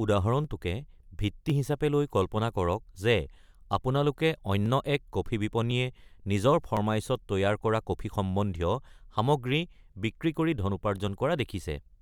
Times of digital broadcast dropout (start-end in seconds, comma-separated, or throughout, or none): none